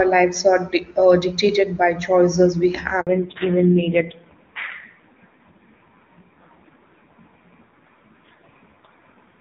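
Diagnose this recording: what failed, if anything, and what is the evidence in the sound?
At 3.01 s the speech dies away to silence for 60 ms, until 3.07 s, and then resumes. This is a handover gap at the network stage. While the call was being passed from one network to another, no speech frames reached the receiver, so the decoder had nothing to play and whatever was said in that window is gone.

From 3.07 s to the end of the clip the speech turns duller and rougher. Nothing remains above 4 kHz, whereas before the break the top end was clear, sounding like AMR-WB at a high rate such as 23.85 kbit/s. This is a fallback to narrowband, set by call processing when the handover completed. The new link carried the call on narrowband AMR, and the raspy texture points to a low rate around 5.9 kbit/s.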